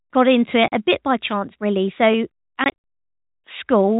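At 0.68 s the speech drops out for 40 ms, to 0.72 s: packet loss filled with silence. The receiver substituted digital silence for missing packets, a gap that fits two 20 ms packets. A second burst starts at 2.64 s, with 120 ms lost in pieces across about 200 ms, the longest run 60 ms. The waveform shows flat silent stretches with abrupt edges. The spectrogram shows blank vertical columns bordered by thin broadband lines, all within G.711's 4 kHz band.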